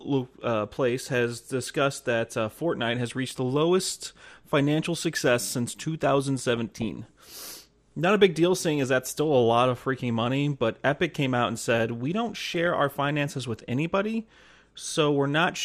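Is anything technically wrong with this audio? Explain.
Yes. Two problems are audible in this speech.

Throughout the clip the sound is dull and carries a gurgling, grainy edge, with the top end missing or fluttering in and out. The likely cause is MP2 compression at a low bitrate, around 80 kbps. MPEG Layer II divides the spectrum into 32 sub-bands and shares out bits among them. When bits run short, the upper bands are switched off and the remaining ones are quantised coarsely. On a spectrogram this shows as a ragged ceiling, with high-frequency blocks blinking on and off frame by frame.

DAB burbling appears twice, from 6.53 to 6.95 s and from 12.46 to 12.67 s, the second just before "our finances with anybody". Both bursts put burbling blips of noise over the speech. Reception errors slip past error correction and corrupt samples and scale factors, so single sub-bands get short blips of noise or jump in level for up to a frame. 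The error rate is low, well under one percent, but the bursts span many frames. A spectrogram shows isolated bright rectangular patches in individual bands at those times, and the waveform shows brief irregular level spikes.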